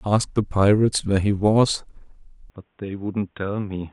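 A speech recording in which the sound changes abruptly at 2.5 s and stays changed to the end: from that point nothing is heard above 3.8 kHz, the level falls by roughly 10 dB, and a faint new background noise appears well below the speech. There is no gap at the transition. This pattern is consistent with the input switched to a poorer device, likely a lower-bandwidth microphone or headset call profile.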